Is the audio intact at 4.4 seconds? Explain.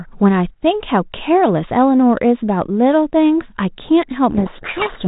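No. From 4.31 s to 5.08 s there is a codec payload misread: the decoder takes the bits of each G.726 code word in the wrong order, so it rebuilds the wrong sample differences and buries the speech in harsh, rasping distortion.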